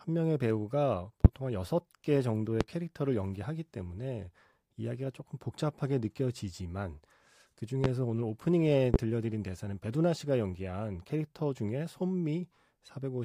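Loud pops hit at 1.25–1.28, 2.61–2.64, 7.84–7.88 and 8.94–8.98 s. Each is one sharp thump, about 20 to 25 dB above the speech. Likely voltage spikes.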